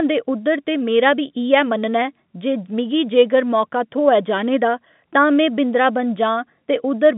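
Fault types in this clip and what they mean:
Nothing's wrong with this one: it's speech carried over an ordinary 64 kbps G.711 phone line, so the narrow band from about 150 Hz up to 3.6 kHz is just how telephone audio sounds and isn't a fault.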